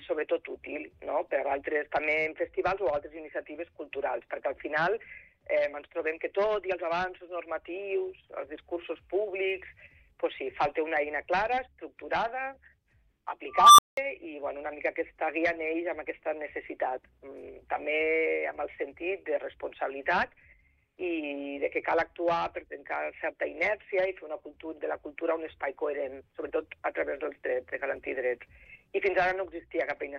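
A recursive filter in the signal path went unstable at 13.48 s, its feedback driving the output upward without limit until 13.97 s. What you hear is a tone of around 1 kHz swelling out of the audio over roughly 303 ms into a loud, clipped squeal. The arithmetic then overflows and the output drops out completely for 190 ms before the filter resets and sound resumes. This is a classic unstable filter.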